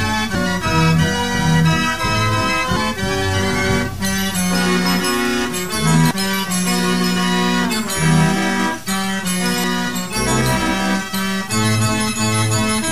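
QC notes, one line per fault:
0.35, 2.77, 6.11 and 9.64 s: damaged data in a compressed stream, heard as brief blips where the decoder misreads corrupted frames and resyncs at the next header. Each appears as a thin broadband vertical streak on the spectrogram and a short waveform discontinuity.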